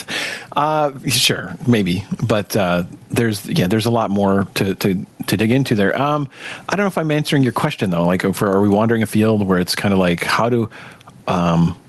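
Gain pumping runs through the whole speech clip. Loud and soft parts are squashed closer together, with the level swinging by around 15 dB. The likely cause is input gain set far too high, with a fast limiter clamping each loud syllable. The waveform looks flattened, peaks pressed to a near-uniform ceiling, and on a spectrogram the noise floor brightens between phrases and darkens under them. The spectrum stops cleanly at the call codec's 12 kHz band edge.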